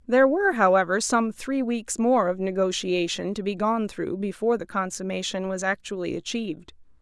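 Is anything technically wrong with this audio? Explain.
No, nothing is technically wrong with this speech recording. There is no technical problem to point to anywhere in it.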